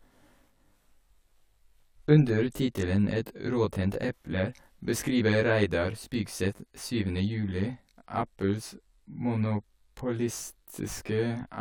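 Channel delay comb filtering runs throughout: one side lags about 20 ms, so mono summing carves notches from around 30 Hz, leaving speech rough and slightly doubled.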